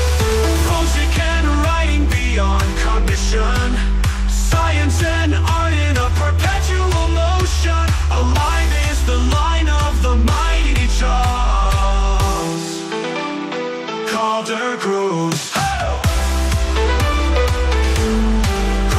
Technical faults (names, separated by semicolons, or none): none